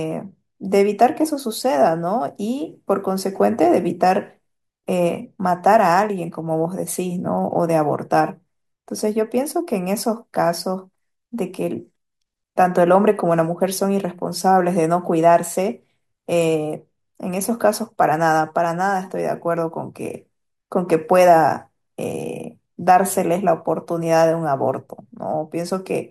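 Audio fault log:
Nothing to log here, as the speech runs along without a single fault turning up.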